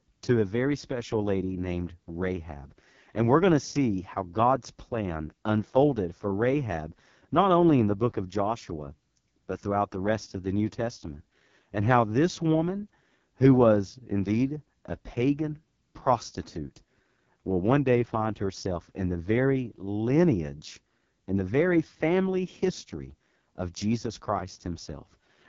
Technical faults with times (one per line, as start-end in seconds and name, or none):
0.00-25.49 AMR wideband (HD Voice) codec